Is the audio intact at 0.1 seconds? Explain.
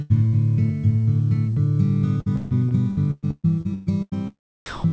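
No. A burst of packet loss runs from about 0.02 to 0.12 s: roughly 80 ms of audio never arrived in time, so the receiver stretched the last sound and faded it, leaving a held buzz or hiss before the audio resumes further on.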